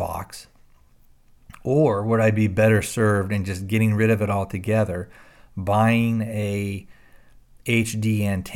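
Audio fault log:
No fault is heard anywhere in the speech.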